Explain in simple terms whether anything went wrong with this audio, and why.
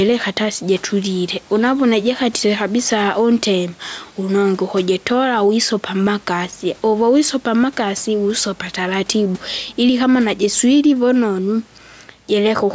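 Gain pumping runs through the whole clip, likely because the microphone level was set far too high and an automatic limiter kept pulling it back down. The speech sounds squashed and uneven in its steadiness.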